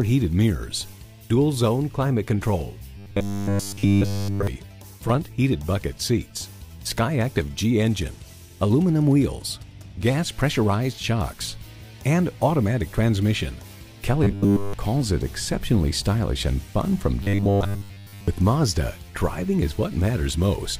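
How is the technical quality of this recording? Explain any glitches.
The recording has three glitches, all robotic sound from repeated short buffers. At 2.97–4.47 s, 14.24–14.74 s and 17.23–18.28 s, a rigid 100 Hz metallic buzz replaces the sound, most heavily in the first two. The likely cause is late audio being covered by looping the last 10 ms.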